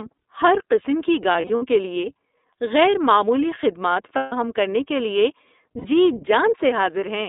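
Narrowband iLBC coding runs throughout, with a band of about 250 Hz to 3.7 kHz and audible roughness, which fits roughly 13 kbps iLBC. Lost iLBC frames follow: at 1.31 to 1.63 s, scattered losses totalling 150 ms, the longest run near 70 ms; at 4.16 to 4.33 s, 150 ms; and at 5.78 to 5.86 s, 60 ms. The decoder repeats the last pitch cycle with noise, so each gap is a held, buzzy vowel before the speech snaps back.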